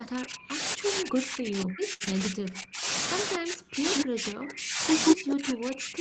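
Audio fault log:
0.00–2.87 s, 3.36–4.83 s and 5.14–6.00 s, speech suppressed in double talk. The speech is pushed down by as much as about 40 dB, dipping and breaking up in pieces. This is likely the echo canceller ducking both talkers while the far side spoke at the same time.
1.93–2.02 s, short stall from a late packet. The sound is held about 70 ms too long, with a slight smeared hold. A packet arrived late, the jitter buffer ran dry, and the last sound was stretched. Nothing is lost.
2.04–2.09 s, short concealed packet loss. About 40 ms of audio never arrived, and 23 ms of it was covered by extending the preceding sound. The patch shows as a brief smear or wobble, and a short consonant there may vanish.
3.94–4.02 s and 5.06–5.13 s, echo leak. A copy of the speech returns about 0.18 s late. It is about as loud as the speech in the first scrap and roughly 10 dB louder in the second. The likely cause is far-end loudspeaker sound getting past the echo canceller.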